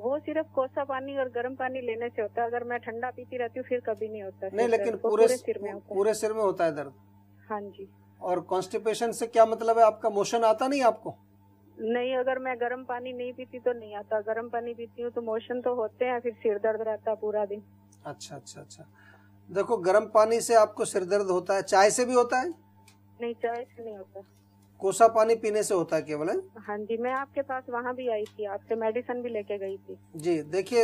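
At 2.86 s and 26.89 s, compressed frames are skipped. The audio jumps ahead roughly 20 ms, consistent with one dropped 23.2 ms frame.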